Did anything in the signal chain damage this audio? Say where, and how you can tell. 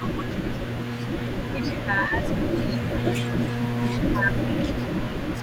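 Yes, in call processing. The speech dips by about 10 dB in short pieces at 0.00 to 0.24 s, 1.54 to 3.57 s, 4.14 to 4.40 s and 4.72 to 5.42 s. This is speech suppressed in double talk. The echo canceller likely turned this side down while the other side was also speaking.

An echo leak runs from 0.03 to 1.85 s and again from 2.31 to 5.42 s. A delayed copy of the speech trails the original by 419 ms, about 15 dB quieter. The far end's canceller likely missed some loudspeaker pickup and sent it back.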